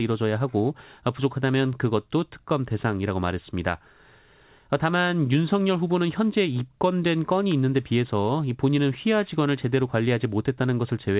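Speech with no audible faults.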